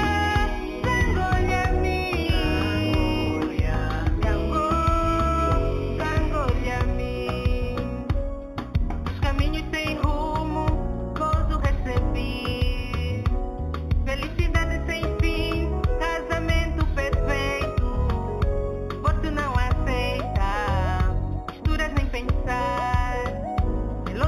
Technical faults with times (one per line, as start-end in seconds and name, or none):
0.00-24.28 imaging from linear upsampling